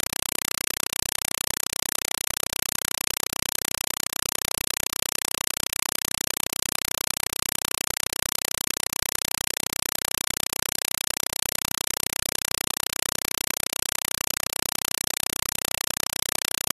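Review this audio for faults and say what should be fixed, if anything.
Compressed stream played as audio throughout: the speech is replaced by loud, chattering static, with 4 ms noise bursts repeating at 31.25 Hz and silence between them. That cadence points to an AC-3 stream, likely 192 kbps, and sets it apart from steady broadband noise or random data corruption. Set the receiver to decode the bitstream, or have the source output PCM instead of passthrough.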